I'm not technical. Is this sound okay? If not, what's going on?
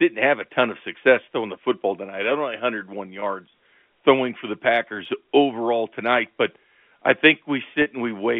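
No. There is packet loss with pitch repetition at 3.20 to 3.22 s and at 7.82 to 7.86 s. Bits of the speech went missing in transit, and the receiver covered each gap by repeating the last vocal cycle, which sounds like a brief held, buzzy moment. The gaps fit about one lost packet, then two. It all arrives over a telephone line, so nothing above about 3.5 kHz comes through.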